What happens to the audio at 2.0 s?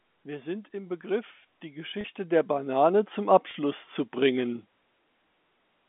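A brief, slightly held and buzzy stretch interrupts the speech from 2.01 to 2.04 s. This is packet loss with pitch repetition. About 30 ms of audio went missing, which fits a single lost packet, and the receiver filled the hole by repeating the last pitch period it had received. A gap this short doesn't fade to silence. It just sounds like a sustained note before the speech picks up again.

Around the same moment, voice and background are both steadily getting louder. This is automatic gain rising. The control judged the input too quiet and is pushing its gain up by about 14 dB over a long ramp from 0.71 to 4.76 s, so the swell is still in progress at 2.0 s. Because the gain acts on the whole signal, the noise floor climbs along with the speech. The narrow telephone band of the G.711 line stays intact through both effects.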